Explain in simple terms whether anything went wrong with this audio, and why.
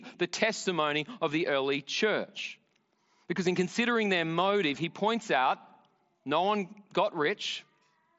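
Nothing went wrong here.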